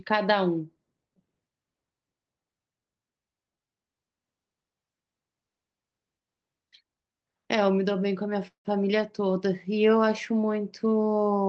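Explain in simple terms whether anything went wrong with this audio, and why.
Around 8.47 seconds the speech briefly stalls: the last sound is drawn out into a fading buzz or hiss that dies into near silence, and at 8.67 seconds the speech picks up again exactly where it left off, with nothing skipped. This is a call audio freeze. The likely cause is that pieces of the audio were held up in transit, so the receiver ran out of sound to play and filled the gap for about 175 ms, stretching the last bit and then waiting.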